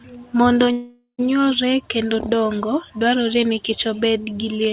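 From 0.72 s to 1.21 s the speech stalls in a call audio freeze: the last sound is stretched into a fading buzz for roughly 370 ms, followed by about 100 ms of silence, before the talker resumes with "nyuolre kendo dongo dwarore". The likely cause is delayed packets draining the jitter buffer, so the receiver filled 466 ms with concealment. Nothing was lost, but everything afterwards is pushed 466 ms later, over a G.711 A-law path with nothing above 4 kHz.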